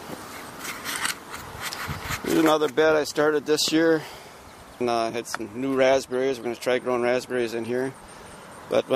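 At 3.68 to 3.70 s a single loud pop sits on top of the sound, which carries on beneath it, peaking around 10 dB above the signal. It likely came from a sudden voltage step or pulse, such as a plug, switch or static discharge. The waveform shows one sharp spike; the spectrogram shows a thin vertical line across all frequencies.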